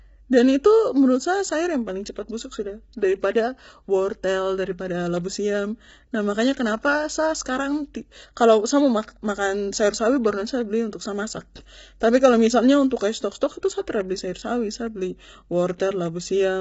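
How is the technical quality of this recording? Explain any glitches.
The recording is heavily compressed throughout, with one brief pre-echo near the end.

For the whole clip the speech sounds rough and grainy, with noise filling the gaps between harmonics and nothing above 7.7 kHz. This is likely low-delay AAC compression: its short frames resolve pitch poorly, and the heavy damage fits a bitrate around 16 kbps. Unlike plain low-pass filtering, it adds graininess as well as removing the top band.

At 12.00 s there is pre-echo: a short hiss spread over about 10 ms before an attack, which sounds softened. The codec spreads quantisation noise across the whole block, including the quiet moment before the onset. Unlike a click, it is smeared noise that leads the attack rather than a sharp transient.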